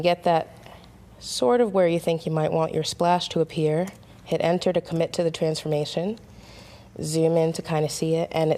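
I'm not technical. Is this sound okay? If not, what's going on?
Yes, nothing stood out as a problem on listening.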